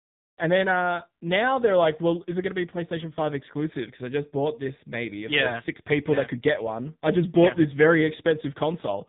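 From start to finish the speech carries the sound of the AMR narrowband mobile codec, with nothing above about 3.8 kHz surviving, so sibilants and consonant detail are cut off and the voice sounds boxed-in and telephone-like. The vocal tract model, excited by only a few pulses per short subframe, leaves the voice heavily buzzy and synthetic, which points to one of the codec's lower modes, around 6.7 kbps.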